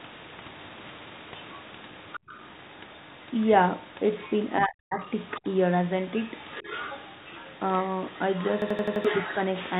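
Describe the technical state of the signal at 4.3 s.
A faint second voice slips in beneath the main speech from 4.18 to 4.33 s. It is a brief scrap sitting roughly 20 dB below the talker, inside a narrow telephone band with nothing above 4 kHz. This is the other side's voice leaking through. The far end's audio is likely playing from the talker's loudspeaker back into the microphone, and the echo canceller left this short fragment in place instead of subtracting it.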